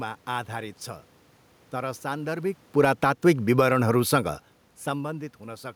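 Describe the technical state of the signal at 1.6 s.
At 1.6 s the speech signal is intact, with only the room noise of the recording space audible beneath it.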